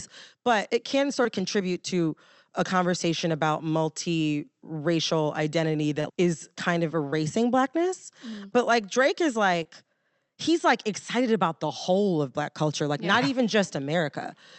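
Short concealed packet loss briefly smears this speech at 1.23–1.27, 6.01–6.13, 7.11–7.17 and 9.63–9.67 s: 20 to 40 ms of audio arrived too late and was bridged by extending the preceding sound.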